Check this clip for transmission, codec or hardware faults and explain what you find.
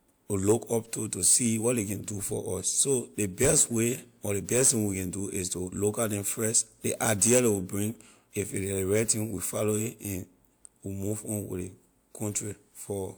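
Nothing turned up here; the speech comes across without any transmission, codec or hardware trouble worth pointing to.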